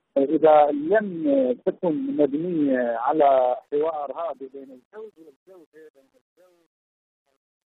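Truncation distortion on the fade runs from 3.08 s to the end at 7.69 s. The fade-out starts around 3 s, but the gain stage behind it drops low-order bits with no dither. That roughness fits roughly a 10-bit path. As the level sinks toward the smallest step, the waveform collapses into coarse square steps. From 4.94 s onward the tail turns gritty.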